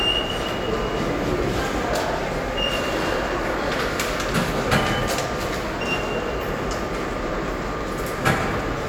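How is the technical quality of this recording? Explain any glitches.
The recording is technically sound, with no glitches, dropouts or other transmission or playback faults anywhere in the audio.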